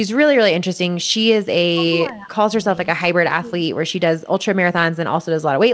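Around 1.04 to 1.14 s there's a brief echo leak: a very faint, delayed copy of the speech slipping back in, trailing the original by about 435 ms. It's most likely a far-end loudspeaker whose echo canceller didn't fully scrub what its microphone caught, so a thin scrap of this voice got sent back. It's low enough that you have to listen for it, a ghostly tail rather than a clear repeat.

Then comes a run of speech suppressed in double talk. The voice dips noticeably at 1.74 to 1.92 s, 2.09 to 2.5 s and 2.85 to 3.15 s, each a deep duck that carves chunks out of the words. At 3.41 to 3.64 s there's a shallower dip. The likely story is the other side talking over this one, with the echo canceller unable to tell its own talker from the loudspeaker echo and turning both down. Throughout, the band tops out at 8 kHz, which fits a wideband call codec.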